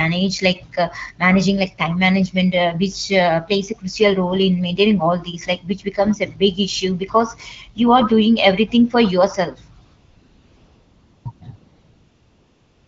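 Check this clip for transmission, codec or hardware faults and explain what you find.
The clip shows one fault type, AMR comfort noise, in three places near the end. The speech itself carries the light coding of AMR wideband (HD Voice), with clean speech that fits a rate around 12.65 kbit/s.

AMR comfort noise occurs from 9.85 to 11.25 s, from 11.31 to 11.41 s, and from 11.55 s to the end. In each gap the sender stops sending speech frames, and the receiver fills the gap with synthetic noise built from a rough level-and-spectrum estimate. The real background gives way to a smooth, even hiss, and the 1.4 s, 0.1 s and 1.3 s patches switch audibly in and out.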